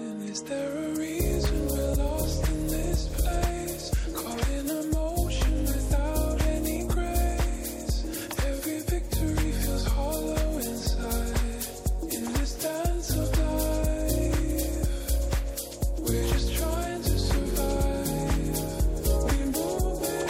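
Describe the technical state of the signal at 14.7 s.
At 14.7 s the signal is intact, with no audible fault at that point.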